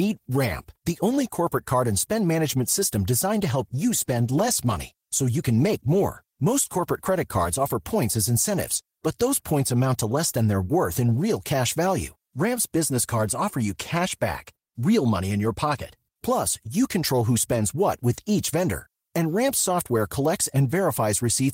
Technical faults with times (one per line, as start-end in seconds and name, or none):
3.36-7.81 call bitrate drop